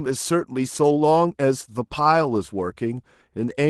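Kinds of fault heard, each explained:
Clock drift between sender and receiver: The sender's audio clock runs around five percent faster than the receiver's, so the jitter buffer keeps overfilling and the receiver has to drop short slices of audio to keep up, leaving small, irregularly spaced timing hiccups throughout the speech.
Repeated timing corrections: To stay in step with the faster sender, the receiver keeps trimming brief pieces from about 0.06 s to 3.26 s, all in the same direction, so this stretch plays at 105 percent speed.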